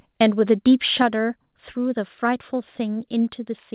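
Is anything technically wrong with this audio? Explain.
Yes, there are two problems, both near the start of this speech recording.

From 0.21 to 0.7 s, the loudest syllables take on a harsh, crackly edge, as if their peaks are being flattened. This is likely microphone overload: the input level was set high enough that the signal ran about 2 dB past the converter's ceiling, so the tops of the waveform were sliced off. Only a small fraction of samples are cut, but squaring those peaks adds the gritty distortion heard on the strongest moments.

At 1.02 s the whole sound, voice and background together, abruptly drops by about 5 dB, a single step rather than a gradual fade. This is likely the microphone volume being stepped down: after the distorted peaks just before, the call software judged the input too hot and cut the device's gain in one move. The step comes right after the overload, which fits the software reacting to the clipping.

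The audio also passed through a call path whose bandwidth stops at 4 kHz, which points to G.711 mu-law at 64 kbps. That limit is normal for this path and is not a fault.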